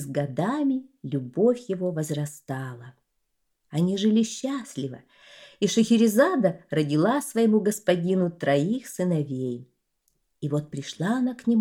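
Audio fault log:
No audible faults were found anywhere in this audio.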